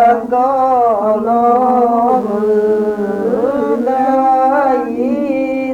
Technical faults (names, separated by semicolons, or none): mains buzz